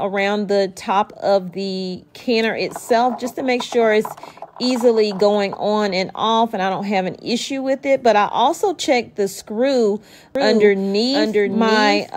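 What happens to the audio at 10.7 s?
At 10.7 s the audio is inside a doubled audio track that starts abruptly at 10.35 s and runs to the end of the clip. A second, full-band copy of the same sound plays roughly 0.7 s behind the original and a few dB quieter, with no decay or room colour. The likely cause is the signal being captured a second time through a slower path, or an edit holding two copies out of step.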